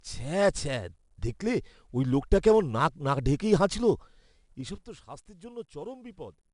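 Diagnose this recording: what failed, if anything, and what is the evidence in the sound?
The codec stage failed: the speech was encoded with 4-bit ADPCM, and the damage is plainly audible. A gritty hiss tracks the level of every loud syllable, attacks sound roughened, and nothing remains above 10.6 kHz, which points to a rate near 89 kbps.

A gain stage applied a level change in stepped increments with no smoothing. From 4.52 to 4.86 s, just before "তো স্বাস্থ্যের", the level falls by roughly 15 dB in 4 dB jumps at about ten per second, and each jump clicks, producing zipper noise.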